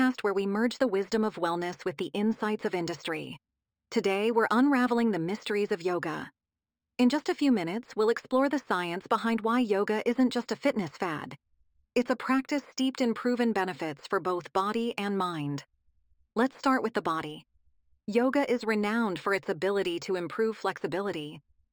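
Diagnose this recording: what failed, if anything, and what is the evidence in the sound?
The sample-rate conversion stage failed. The audio was upsampled by straight-line interpolation, which fits a 12 kHz source raised to 48 kHz. This imaging from linear upsampling dulls the top of the speech band and leaves mirrored spectral copies from 6 kHz to 12 kHz, around 30 dB down, heard throughout as faint metallic shimmer on sibilants.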